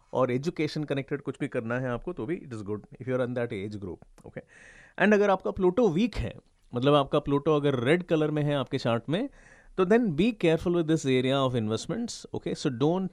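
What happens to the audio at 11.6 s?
Nothing goes wrong at 11.6 s; the speech there plays through cleanly, with no dropout, click or distortion.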